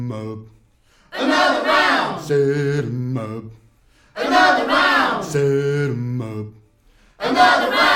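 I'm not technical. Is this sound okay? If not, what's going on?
Yes, this sound is okay; nothing is going wrong in this music.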